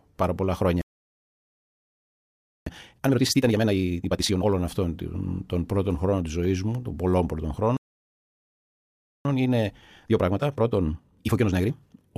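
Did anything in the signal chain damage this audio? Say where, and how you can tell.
Yes. Playback stalls at 0.81 to 2.66 s, just after "πάρα πολλά χρόνια", and at 7.77 to 9.25 s silence mid-flow, likely a starved player buffer.

Time-compressed catch-up follows each stall. From 2.66 to 4.51 s the audio runs at double speed up to "αυτών των πρώτων χρόνων", and from 9.25 to 12.11 s it runs at 1.5 times. Pitch stays normal, which rules out resampling.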